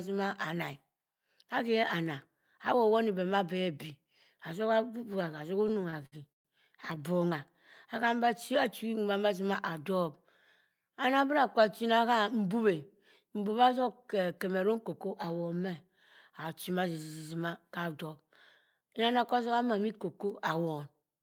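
A speech clip with repeated stalls (stutter) from 5.61 to 6.47 s. There are nine gaps, the longest 125 ms. Packets arrived late, so the jitter buffer kept running dry. The receiver stretched the last sound each time, about 271 ms in all. Nothing is lost, but the speech drags.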